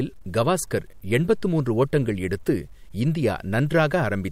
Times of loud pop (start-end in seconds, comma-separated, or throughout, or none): none